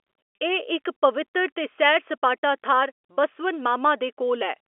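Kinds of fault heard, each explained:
Packet loss with pitch repetition: at 0.36 s about 20 ms of audio, consistent with one lost packet, is bridged by repeating the last pitch period. The sound briefly holds with a slight buzz instead of dropping to silence or clicking like a plain dropout.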